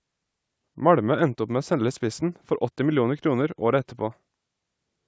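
Nothing is technically wrong with this speech clip, which shows only the ordinary effects of call microphone processing, with the lowest bass taken out and nothing above 8 kHz.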